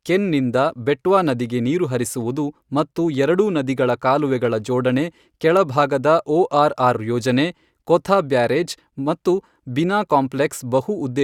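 No technical faults occur anywhere in this speech recording, so there is nothing to describe in time order.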